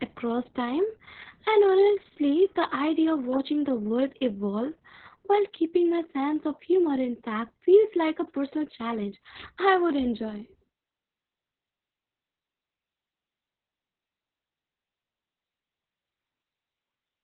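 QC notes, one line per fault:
Throughout: Opus voice compression. The speech is muffled and hoarse, with a slightly robotic edge. Nothing is present above about 4.2 kHz, so the band has been cut to narrowband and consonants lose their crispness. The codec runs in its linear-prediction voice mode and codes the excitation very coarsely, which fits a bitrate near 6 kbps. The damage is heavy. It uses long 60 ms frames.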